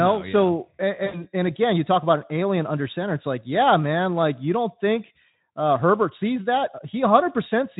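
Just after "no yeah so", at 1.05 s, the speech drops into VoIP packet loss concealment, running until 1.25 s and into "and again you talk". About 80 ms of audio went missing, which fits four lost 20 ms frames. The Speex decoder, otherwise lightly coloured at around 15 kbps, extrapolated its last pitch and filter. This gives a stretched buzzy tone or coloured noise that fades. On a spectrogram, the stretched sound thins out, and the waveform shows a steadily shrinking envelope.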